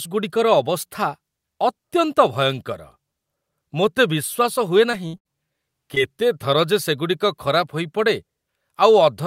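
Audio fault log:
4.91–4.95 s and 5.95–5.98 s, short concealed packet loss: a brief smear or wobble each time, as about 20 ms of audio failed to arrive in time and the receiver bridged roughly 15 ms by extending the preceding sound before blending back.
5.07–5.15 s and 5.17–5.27 s, burst of packet loss: two closely spaced held, fading stretches of buzz or hiss, then a jump ahead. About 60 ms and 80 ms of audio were lost, and the receiver continued the last sound for 63 ms and 76 ms while turning it down.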